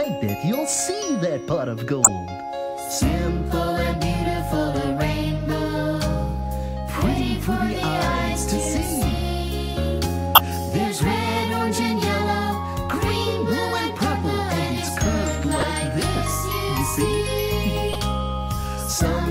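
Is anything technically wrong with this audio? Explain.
Yes. There are four corrupt frames decoded, at 2.04 to 2.09 s, 10.35 to 10.38 s, 15.60 to 15.71 s and 17.93 to 17.96 s. Damaged compressed frames were played anyway, so misread data puts energy at wrong frequencies. Each spans a few frames and sounds like a brief chirp or noise burst. The first two are the strongest, and the last two are somewhat quieter.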